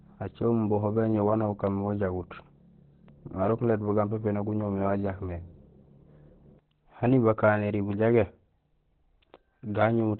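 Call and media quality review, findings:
Muffled, hoarse speech throughout, with nothing above 4.2 kHz; narrowband telephone-like dullness. Likely cause: Opus compression in its SILK speech mode at a very low bitrate, consistent with about 12 kbps. At that rate the encoder narrows bandwidth and models speech coarsely, which produces heavy codec damage.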